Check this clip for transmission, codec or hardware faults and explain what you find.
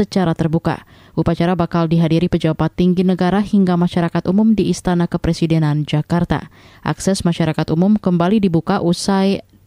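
Nothing in this speech recording points to a fault in transmission, encoding or hardware, and the signal holds steady throughout.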